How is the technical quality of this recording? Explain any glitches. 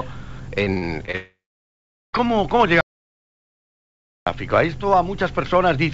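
Quality is poor, with three distinct failures in the first four and a half seconds, all heard through a G.722-style call path that leaves nothing above 8 kHz.

From 0.64 to 1.16 s there is repeated packet loss (robotic sound). Five short holes, the longest 38 ms and about 120 ms in total, are each patched by extending the previous sound. About 23% of that span is concealed, giving a choppy texture.

From 1.16 to 2.15 s comes a long network dropout, likely from a stalled connection. The receiver stretches the last sound into a fading buzz or hiss, then about 0.78 s of near-silence follows. Roughly 0.98 s of audio never plays, and the sound resumes without it.

From 2.81 to 4.26 s there is an audio dropout to silence, likely a lost input or link while recording continued. The sound cuts off abruptly into silence, with no room tone, for about 1.46 s. It then restarts mid-flow with that stretch missing.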